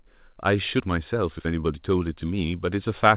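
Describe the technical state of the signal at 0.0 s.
At 0.0 s the signal is intact, with no fault present; the speech is carried through a normally working WebRTC call path whose G.711 mu-law coding leaves nothing above 4 kHz.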